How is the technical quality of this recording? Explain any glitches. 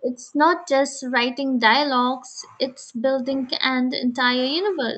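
No glitches turn up here at all; the speech has simply come over a WebRTC call path, and the top end stopping at around 8 kHz is just what that call codec normally does rather than anything going wrong.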